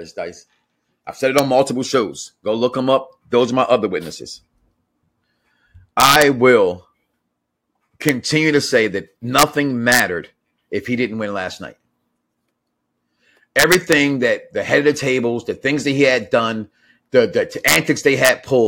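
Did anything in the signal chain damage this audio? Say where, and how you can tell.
Yes. Integer overflow in a gain or sample-format conversion stage: peaks pushed at most about 2 dB past full scale wrapped to the opposite extreme instead of limiting, giving violent cracks, sharper than clipping, at 1.39, 6.00–6.22, 8.09, 9.39–9.43, 9.92–10.00, 13.59–13.93, 17.68–17.76 and 18.25–18.29 s.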